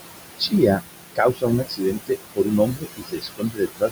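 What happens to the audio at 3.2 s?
At 3.2 s the speech is cut by the noise suppressor, within a span from 1.64 s to the end. Speech mistaken for noise drops up to about 22 dB, so endings sound swallowed; the waveform shows abrupt dips.

Noise suppressor artifacts are also present. Background noise is pushed down about 20 dB frame by frame, so it sinks between the words and rises under them.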